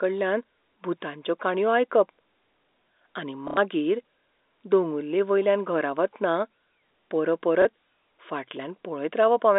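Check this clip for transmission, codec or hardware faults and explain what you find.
Two transmission faults are audible, both packet loss with last packet repeated. The first runs from 3.48 to 3.57 s, about 90 ms. The second runs from 7.62 to 7.65 s, about 30 ms. Packets failed to arrive, so the receiver replayed the last good one until fresh audio came. The 90 ms gap fits three lost 30 ms packets. The replays seldom join in step with the pitch. The longer run gives a brief robotic stutter buzzing near 33 Hz. The G.711 telephone band, 250 Hz to 3.7 kHz, carries through both events.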